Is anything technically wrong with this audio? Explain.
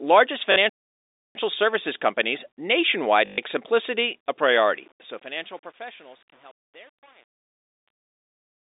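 Yes. There are three separate faults in this telephone-band speech.

Packet loss with the last packet repeated happens twice. The receiver lost audio packets and filled each gap by replaying the last good one. The first gap runs 0.52 to 0.56 s, just before "services companies". It lasts 40 ms, which fits two 20 ms packets. The second runs 3.26 to 3.38 s, just before "simplicity a". It lasts 120 ms, about six packets. The repeats don't line up with the pitch cycle, and the longer run buzzes at about 50 Hz as a short robotic stutter.

A playback stall follows from 0.69 to 1.35 s. The output goes completely silent for about 0.66 s in mid-flow. This is likely because the player ran out of buffered data or its thread was blocked, so nothing reached the output until it recovered.

Truncation distortion on a fade begins at 4.43 s and lasts to the end of the clip. It is worst from 4.68 s. The fade-out that starts at 4.43 s was processed at 8 bits with no dither. 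As the level sinks toward the smallest step, the waveform collapses into a few coarse steps, so the tail turns gritty rather than dying away cleanly.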